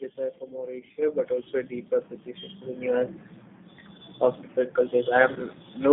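Throughout the clip the speech carries the sound of the G.729 codec: a narrow line band from about 150 Hz to 3.6 kHz, with a slightly rough, synthetic texture. That texture comes from rebuilding the voice from a filter, a pitch predictor and sparse pulses, and fits an 8 kbit/s stream.

From 5.33 to 5.39 s there is a VoIP packet loss concealed by the speech codec. The decoder fills the 30 ms gap, which fits three lost 10 ms frames, by extending its last pitch and filter at falling gain. This produces a brief fading smear of buzzy tone or coloured noise.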